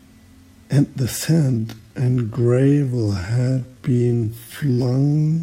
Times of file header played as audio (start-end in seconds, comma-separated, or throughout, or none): none